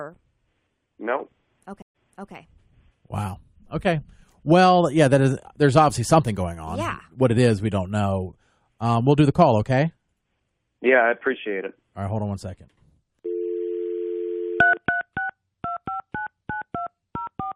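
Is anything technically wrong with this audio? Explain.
Yes. There is a stream reconnect between 1.82 and 2.33 s. The speech drops out for about 124 ms, the connection breaks, and the player starts a new decoder partway through the stream. When the audio returns, it begins 384 ms earlier than where it stopped, so a short stretch of speech is heard twice. This fits a server resending a buffered burst after the reconnection. The first frame after the gap fades in, which makes the re-entry soft.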